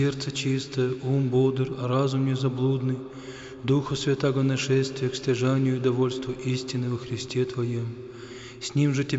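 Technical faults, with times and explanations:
Nothing technical jumps out here; the audio runs along without any dropouts, glitches or other problems worth flagging.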